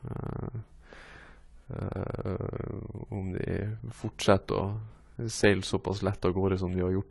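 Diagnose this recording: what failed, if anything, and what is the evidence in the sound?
The codec stage likely applied AAC compression, fitting a low bitrate near 32 kbps. Speech throughout sounds dull and smeared, with nothing above 11.5 kHz.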